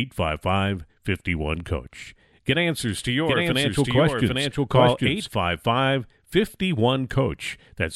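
A doubled audio track runs from 2.88 s to 5.28 s: a second, full-band copy of the speech sits roughly 0.7 s behind the original at about the same loudness, so every phrase is answered by an identical repeat. It carries no decay or room colour, unlike an echo, and it cuts in and out abruptly at both ends. The likely cause is the sound being captured twice, once through a slower path.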